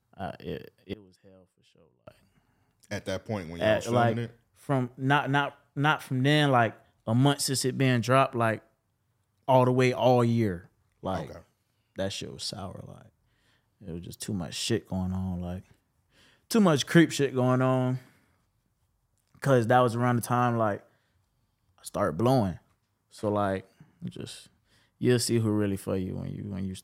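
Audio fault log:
0.93–2.07 s, one channel inverted: speech falls about 25 dB, likely one channel's reversed polarity cancelling in mono; waveform shrinks, spectrogram dims.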